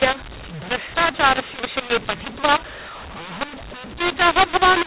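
Speech over an 8 kHz G.711 telephone path, with mu-law and A-law mixed up throughout: the mu-law-coded samples were decoded as A-law, scrambling levels into harsh distortion and lifting pauses into noise.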